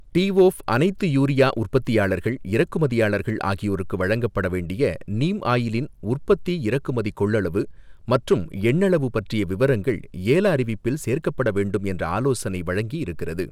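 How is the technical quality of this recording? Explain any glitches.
The speech has three short bursts of hard clipping: 0.18–0.42 s and 1.40–1.76 s (about 2 dB over), and 8.14–8.33 s (about 3 dB). Peaks exceed the stage's limit and are sliced flat, giving crackle on loud syllables. The waveform shows squared-off tops, and the spectrogram shows brief smears of high-frequency energy.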